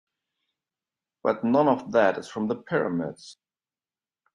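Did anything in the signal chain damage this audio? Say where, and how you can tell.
Yes. At 3.33 s the speech jumps abruptly forward with a brief blip, as if a stretch of the talk had vanished. This is likely a stream segment skipped at the network stage: one segment failed to load, and the player resumed with the next one instead.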